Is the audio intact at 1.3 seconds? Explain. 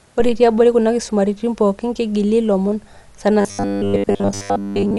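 No, not really. At 1.3 seconds, like the rest of the speech clip, there's a dull, band-limited sound and a rough, fluttery noise hanging around the tonal parts. That's likely Dolby Digital compression, and the damage is plainly audible. The encoder drops the top of the band and leaves many frequency lines with no real detail, so the decoder fills them with noise. It sounds like a low bitrate, around 64 kbps.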